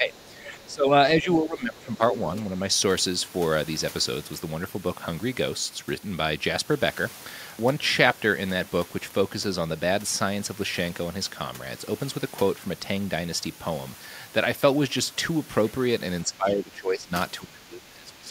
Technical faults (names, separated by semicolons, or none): speech suppressed in double talk; other side's voice leaking through